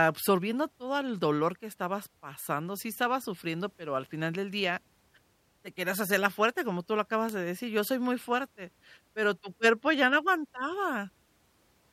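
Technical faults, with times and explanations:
7.29 s and 9.94 s, bit error spike: a single flipped bit in one sample, after "como tú lo acabas" and after "tu cuerpo", jumps to about -11 dBFS and about -29 dBFS, giving sharp broadband ticks unrelated to the speech.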